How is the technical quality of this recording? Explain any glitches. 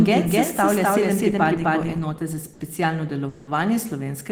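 The recording has three glitches.

From the start to 1.98 s, a doubled audio track is heard: the speech echoes itself at roughly equal loudness, about 300 ms behind, with no room decay. It is likely from a second, slower capture path mixing in.

At 2.53 to 2.62 s, a sound is held unnaturally long with a slight buzz or dip. This is a short stall from a late packet: the jitter buffer emptied and the receiver stretched the last sound for 70 ms, losing nothing.

At 3.28 to 3.49 s, the speech freezes into a fading buzz or hiss for 190 ms without falling silent, then resumes where it stopped. This is a call audio freeze, likely from packets held up in transit draining the jitter buffer.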